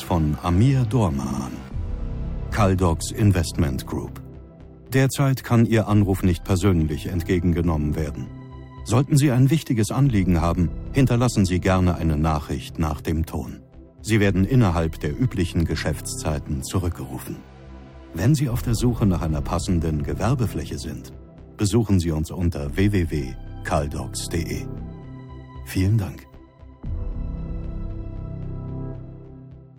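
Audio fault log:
1.23–1.44 s repeated frames: a short stretch of the compressed stream was written out again, so the decoder replays the same slice of sound instead of moving on. The repeated block is about 69.7 ms long and plays three extra times, adding 209 ms to the audio, which fits a run of three encoded frames. It is heard as a brief stutter.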